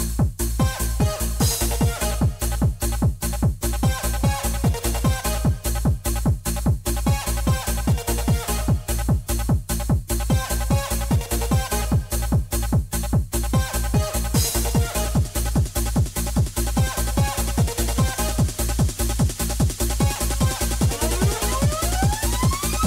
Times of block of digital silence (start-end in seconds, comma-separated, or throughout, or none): 20.15